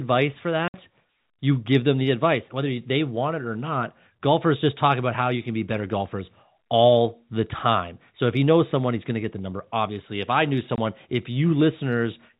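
Speech heard through a telephone-band channel with nothing above 4 kHz has two sharp dropouts into dead silence, from 0.68 to 0.74 s and 10.76 to 10.78 s. This is packet loss filled with silence: gaps of 60 and 20 ms fit lost 20 ms packets replaced by silence.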